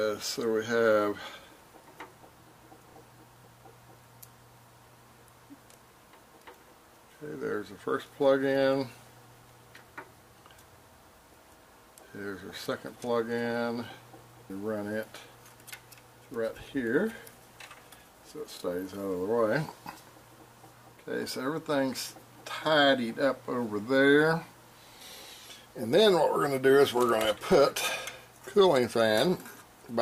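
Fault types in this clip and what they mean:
No faults can be heard in this clip. Nothing in the sound calls for a fault entry here.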